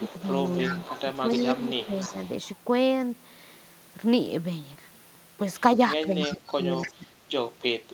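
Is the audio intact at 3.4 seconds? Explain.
Yes, the speech at 3.4 seconds is intact, with no dropout, click, distortion or other technical fault at that moment.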